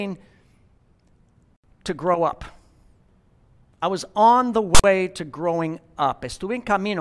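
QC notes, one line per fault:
4.75–4.84 s, file tags played as audio: between "I was on the" and "to growing", text tag bytes read as samples give a loud, hard-edged rasp offset to one side, then silence from zero padding. Waveform: lopsided dense block, then flat line. Spectrogram: sharp broadband slab, then blank gap.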